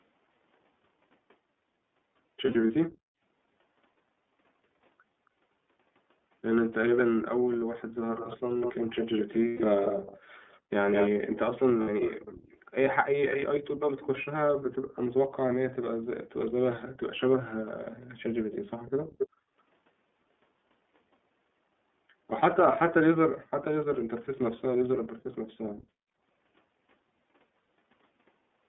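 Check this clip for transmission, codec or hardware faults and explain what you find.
There are a few things going on, all consistent with a narrowband VoIP call over a speakerphone link.

Across the whole clip you're hearing the iLBC codec. The line is squeezed to about 200 Hz to 3.5 kHz, so there's no top end and not much low warmth. iLBC codes each frame's excitation on its own, without reference to the previous frame, and here the damage is plainly audible: the speech sounds clear enough but a bit rough and synthetic. The 30 ms frame timing fits the 13.33 kbps mode.

Then there are lost iLBC frames in three places. Between 2.45 and 2.70 s roughly 120 ms goes missing in short scattered chunks, each around one frame long. At 9.48 to 9.61 s there's another 120 ms gap, and at 11.82 to 11.88 s a 60 ms one. When packets vanish, the decoder fills in by repeating the last pitch cycle with some noise mixed in, so each gap comes across as a brief held, slightly buzzy vowel. 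Because the frames stand alone, the voice snaps back straight afterwards.

You'll also notice background gated by the echo canceller at 2.95 to 3.08 s, 19.06 to 19.18 s and 23.32 to 23.51 s. While the loudspeaker was playing, the canceller clamped the mic down by about 40 dB. The room tone drops out for roughly a tenth to a fifth of a second and comes back once the canceller releases.

Finally there's echo leak from 6.96 to 14.07 s and again from 18.52 to 19.28 s. You hear a delayed copy of the speech, about 0.2 s behind in the first stretch and about 0.27 s behind in the second, and only a little quieter than the original. The likely cause is a loudspeaker on one end whose echo canceller didn't fully scrub what its mic picked up, so part of it got sent back down the line.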